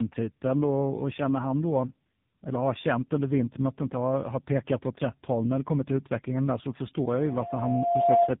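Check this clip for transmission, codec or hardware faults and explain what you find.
Two faults are audible: tandem speech coding across the whole clip and a loudspeaker feedback squeal near the end.

Tandem speech coding is present throughout. The speech went through two speech codecs in a row, apparently GSM full rate and then low-rate AMR narrowband with a G.711 link between them. Each codec re-encodes the previous one's artefacts, so the speech is rougher, more muffled and more warbly than one codec alone would make it. Nothing is heard above 3.8 kHz.

A loudspeaker feedback squeal runs from 7.09 to 8.35 s. A microphone picked up its own loudspeaker, and the loop gain exceeded one at 693 Hz. Unlike a steady interfering tone, it swells by itself over about a second and ends up around 10 dB above the speech.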